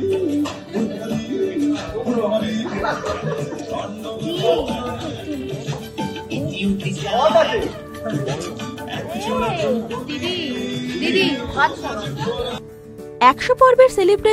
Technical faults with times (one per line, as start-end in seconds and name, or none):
none